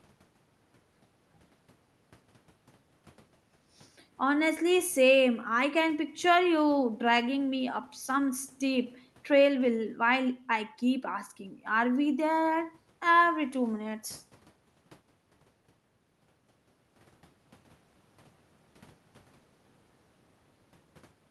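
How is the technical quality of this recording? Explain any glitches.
The technical quality of this speech recording is good, with no glitches to explain.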